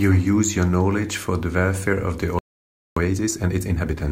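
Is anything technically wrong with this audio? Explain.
Yes. From 2.39 to 2.97 s there is a playback stall: the speech cuts off mid-flow into 0.58 s of silence, likely because the player ran short of data or its output thread was blocked. Unlike a dropout or packet loss, the output simply goes silent until the player recovers.

From 2.97 to 4.01 s comes time-compressed catch-up. The player clears its backlog by removing small slices and cross-fading the joins, so the speech runs at 1.5 times normal speed. Pitch stays natural, which rules out a sample-rate or clock mismatch.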